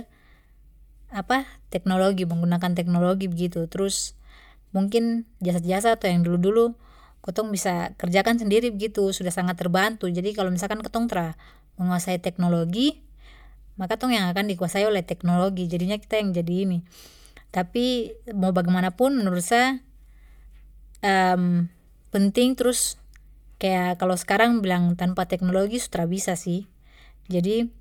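No technical faults are audible.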